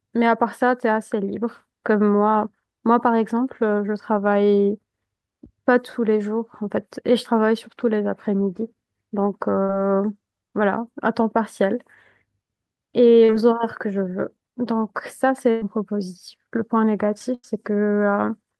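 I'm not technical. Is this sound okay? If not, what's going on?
No, not quite. There are small dropouts in this speech recording, where bits of the call never arrived in time.

The main problem is a burst of packet loss, which happens three times: at 9.63 to 9.70 s, 15.51 to 15.62 s, and 17.34 to 17.44 s. Each time, a chunk of sound between about 50 and 110 ms long went missing. The receiving end kept stretching the last sound and letting it fade, so you hear a held buzz or a hiss dying away. Then the speech picks up a little further on, with that piece simply gone. The longest one is around 15.5 s.

There is also one short concealed packet loss, at 13.25 to 13.30 s. Here only about 40 ms was lost. The receiver patched the hole by continuing the sound and then blending back into the real speech. It comes across as a brief smear or wobble, and a very short sound at that moment can disappear.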